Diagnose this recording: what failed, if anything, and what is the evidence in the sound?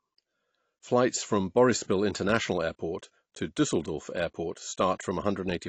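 The failure sits at the codec stage, most likely AAC compression of the AAC-LC kind at a low bitrate, with damage plainly audible across the whole speech recording. Nothing survives above about 8.6 kHz, pointing to a cut-off the encoder lowered to save bits, which fits roughly 32 kbps. With too few bits for its frequency lines, the encoder dropped upper detail and coarsely quantised the rest, leaving the speech dull, smeared and audibly coloured throughout.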